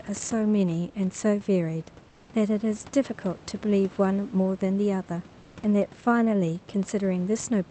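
At 2.09 to 2.29 s, and again at 5.41 to 5.55 s, the room background in the speech gaps drops out and is replaced by comfort noise: a smooth, featureless hiss, about 5 dB quieter the first time and about 3 dB quieter the second. The likely cause is the call codec's discontinuous transmission stopping during silence, so the receiver fills the gap with synthetic noise until the talker resumes.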